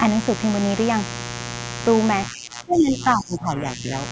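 A mains buzz runs under the speech from start to finish. It is built on 60 Hz. Switching spikes arrive twice per mains cycle, so a whole ladder of harmonics climbs well into the kilohertz range. That gives it a raspy, edged tone rather than a smooth hum. It sits only around 10 dB below the speech. Like the speech, it stops at 8 kHz, the limit of the call's microphone path.

From 2.29 s to 3.91 s the talker's speech weakens. This is likely speech suppressed in double talk, with the far side talking at the same moment. The echo canceller could not tell the talker from loudspeaker echo, so it turned the signal down. Altogether about one and a half seconds are affected. The deepest dips reach roughly 15 dB. The speech sounds pushed back there.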